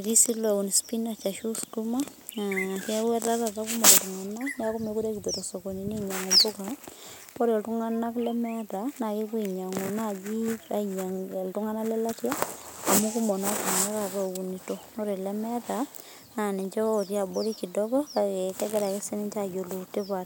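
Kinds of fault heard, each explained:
Nothing stood out on listening to the speech here, and no technical fault could be heard at any point.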